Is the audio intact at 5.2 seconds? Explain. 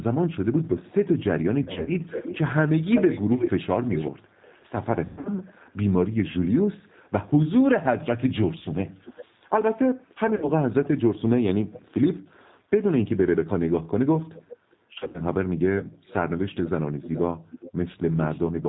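No. From 5.05 to 5.29 s the sound smears into a buzzy tone or coloured noise that fades. This is VoIP packet loss concealed by the speech codec: about 180 ms went missing, and the decoder stretched its last pitch and filter to fill the gap. Throughout, and at this moment too, the speech is band-limited below 4 kHz and slightly rough and synthetic, the plainly audible signature of the 8 kbit/s G.729 codec.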